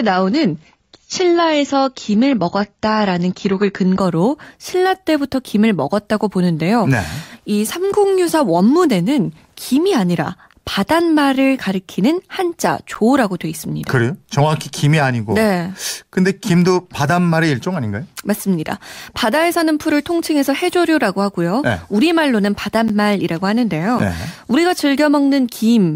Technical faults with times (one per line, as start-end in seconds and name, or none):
0.00-4.00 adaptive stream starting at a low bitrate
12.95 block of digital silence
22.88 block of digital silence
23.99 block of digital silence